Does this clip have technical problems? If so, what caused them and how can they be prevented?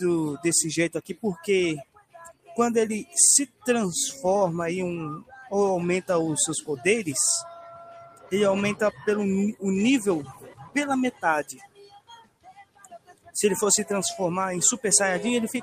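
Yes. A noise suppressor built for speech was applied to this sound for its full length. It treats sustained tones, ambience and reverb as noise, so held material sinks while attacks pass. The level swings by around 15 dB, giving a pumping, thinned result. Bypass speech noise suppression for non-speech sources.

The sound was cut by the noise suppressor harder at 0.95–1.48 s (about 17 dB), 1.83–2.58 s (about 20 dB), 3.46–3.66 s (about 20 dB), 5.19–5.52 s (about 17 dB), 7.54–8.32 s (about 15 dB), 8.91–9.07 s (about 13 dB), 10.22–10.76 s (about 18 dB) and 11.47–13.35 s (about 21 dB). In these spans it took steady or decaying sound for noise, dropping its level and truncating tails. Switch the suppressor off or to a music-safe mode.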